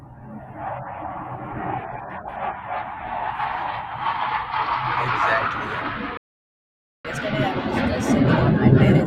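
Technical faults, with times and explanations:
6.17–7.05 s, playback stall: the speech cuts off abruptly in mid-flow and the output goes completely silent for about 0.87 s before picking up again where it left off. Nothing is missing from the speech itself; it is simply paused with a hole in the middle. This is likely the player running dry of buffered data, or its audio thread being held up, so that nothing reached the output until it recovered.
7.05 s to the end, catch-up at higher speed: right after the gap the speech runs fast, at 1.15 times normal speed, and sits about two semitones higher, so it sounds hurried and slightly chipmunk-like. Both speed and pitch rise together because the player is resampling its queued backlog to play it out faster and win back the time lost in the stall. The raised rate lasts through the end of the clip.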